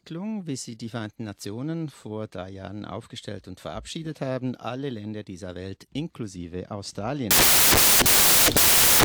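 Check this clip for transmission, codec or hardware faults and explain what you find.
One fault is present, confined to the end of the clip. From 7.31 s to the end, the samples are built from the wrong bytes: the decoder assembles each sample with its bytes misaligned or in swapped order, so the rapidly fluctuating low-order bits land in the most significant position. The result is loud, harsh broadband noise. A waveform shows a sudden block of dense hash; a spectrogram shows a flat, bright band filling every frequency.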